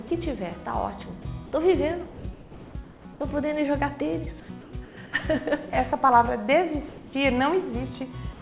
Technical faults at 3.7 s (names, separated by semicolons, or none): none